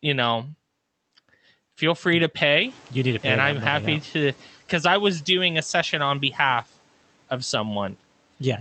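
Speech, with a noise suppressor catching up. Room noise jumps about 15 dB near 2.5 s, and from 2.61 to 4.4 s it leaks through under-reduced, then sinks by about 6 dB as the suppressor's noise estimate adapts over 1.79 s.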